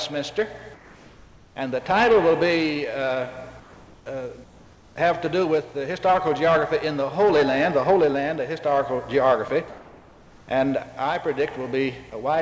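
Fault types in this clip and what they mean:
comfort noise in place of the background: During the pauses at 0.74–1.56 s, 3.60–4.06 s, 4.44–4.96 s and 9.68–10.48 s, the real background, sitting about 28 to 29 dB below the loud parts, gives way to a smooth, detail-free hiss that is about 1 to 4 dB quieter, likely because the sender stopped transmitting and the receiver synthesised noise instead. Nothing but background is lost, which separates it from a dropped sound.
sound dropped by the voice detector: At 9.48 s a 20 ms piece of the sound itself vanishes and is replaced by the same flat synthetic noise, likely because the sender's detector mistook a quiet bit for background and briefly stopped sending. Unlike comfort noise filling a true pause, this cuts into the wanted sound, leaving a tiny gap just before the longer comfort-noise stretch. The call path's G.722 coding, with nothing above 8 kHz, stays unchanged throughout.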